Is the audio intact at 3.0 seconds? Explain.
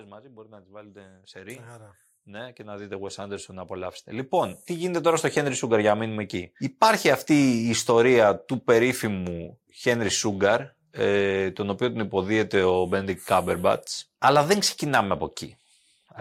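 No, at 3.0 seconds you're in the middle of an automatic gain rise running from 0.16 to 5.64 s. The gain control decided the input was too quiet and cranked it up by about 20 dB, so the speech and the background swell together until it settles just before "για να μείνουμε εκεί".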